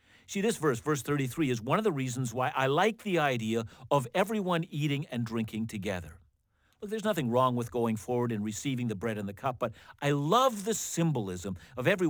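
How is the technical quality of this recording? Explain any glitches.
The recording is compromised by one fault that runs through all of it. Sample clock jitter is present from start to finish. The converter's clock wanders by a few microseconds, so each sample is timed slightly wrong. The resulting error follows the waveform's slope, sitting around 30 dB below the speech as a gritty hiss that swells on loud, bright syllables. Unlike a steady noise floor, it disappears entirely in pauses.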